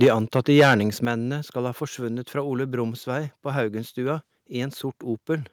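At 0.02 s the speech opens with harsh crackle on its peaks, lasting to 0.09 s. This is microphone overload. The tops of the waveform are flattened, likely because the input gain drove the converter about 6 dB past its limit. A sizeable share of that short stretch is clipped. At 0.04 s, inside that burst, the level falls abruptly by about 3 dB. This is the microphone volume stepped down, likely by the call software reacting to the overload.

From 0.35 s to 0.75 s the distortion returns. The loudest syllables turn gritty and brittle. This is again microphone overload, likely from input gain running about 9 dB too hot. Fewer samples are clipped than in the first burst.

At 1.05 s, just before "skal ha forsvunnet fra", the speech and background drop sharply by about 7 dB. This is a second microphone volume step-down, likely an automatic gain cut following the earlier clipping.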